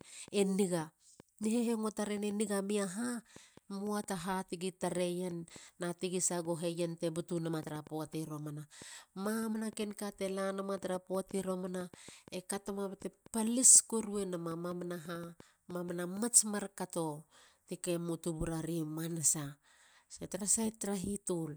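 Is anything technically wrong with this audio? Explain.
Yes. From 0.01 s to 16.18 s there is a train of clicks, likely from interference or a faulty connection or power supply injecting brief pulses. About fifty similar clicks arrive unevenly, around 3.6 per second, roughly as loud as the speech, ticking over it and through the pauses.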